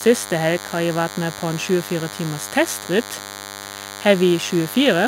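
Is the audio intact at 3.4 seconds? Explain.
No. DECT cordless phone buzz runs through the whole clip, including 3.4 s. A nearby DECT handset or base sends a radio burst every 10 ms, which the audio circuitry rectifies, giving a thin, steady 100 Hz buzz rich in harmonics, roughly 15 dB below the speech.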